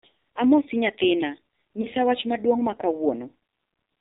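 Throughout, the speech has passed through the AMR narrowband mobile codec at a low bitrate; the heavy damage fits the 5.9 kbps mode. The signal was resampled to 8 kHz, so nothing above 4 kHz survives, and each frame was rebuilt from a vocal tract model driven by only a few pulses. With so few bits, the voice comes out dull, buzzy and synthetic, with a muffled, telephone-like top end.

From 1.82 to 1.87 s, just before "wach maduong' mar", a lost AMR speech frame failed its checks, and the decoder filled the gap by repeating the last good pitch and vocal tract settings at reduced gain. The length fits a single missing 20 ms frame. It is heard as a brief dip or warble in the voice, after which the speech returns weak or rough for a moment.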